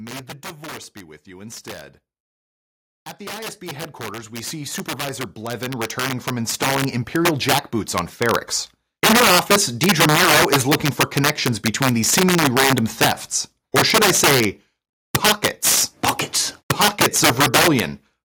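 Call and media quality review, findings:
Integer overflow throughout: harsh cracks on loud speech peaks. A sum or gain stage pushes about 6 dB past full scale and wraps sign instead of saturating; only a small fraction of samples hit.

Automatic gain rising, 3.18 to 8.5 s: speech and background swell together by about 18 dB. AGC decided input was too quiet and ramped gain up gradually.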